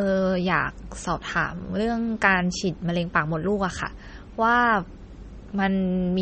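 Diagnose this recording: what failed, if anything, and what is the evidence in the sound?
The fault sits at the codec stage and runs through the whole speech clip: the audio has nothing above 8.4 kHz, and the damage is plainly audible as a watery, swirling texture. The likely cause is MP3 compression at a starved bitrate, which points to something near 33 kbps. Short of bits, the encoder removed the treble at a fixed cut-off and zeroed weak frequency lines, letting them flicker between frames.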